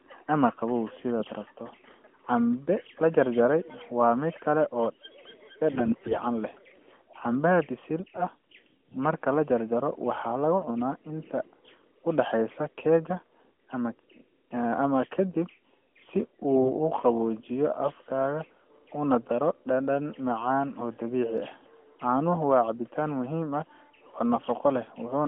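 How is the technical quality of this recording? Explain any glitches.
The speech is narrowband, limited to roughly 200 Hz to 3.4 kHz, which fits AMR-NB at its 12.2 kbps mode, and it has three short glitches.

AMR bit errors at 5.72 to 6.20 s, 8.00 to 8.24 s and 16.50 to 16.71 s: a few percent of the less protected bits arrive flipped, misplacing excitation pulses and fine pitch, gain and spectral values. Pitch and level hold, but the voice turns hoarse, scratchy and gargly.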